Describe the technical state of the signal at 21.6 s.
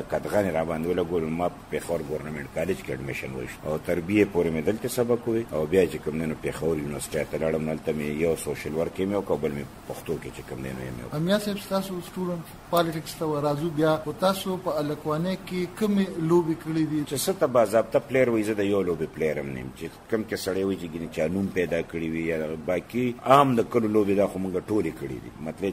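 At 21.6 s the signal is intact, with no audible dropout, distortion, clipping or other fault at that moment.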